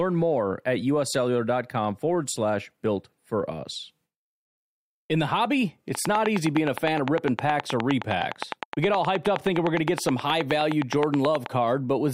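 From 5.95 s to 11.47 s a train of clicks runs over the speech: short, near-identical pulses at a steady 9.6 per second, roughly fifty in all, peaking around 15 dB above the signal. They sound like a fast, even ticking that continues through the pauses as well as the speech. The cause is likely electrical interference from nearby equipment or a faulty connection or power supply, injecting the same pulse repeatedly.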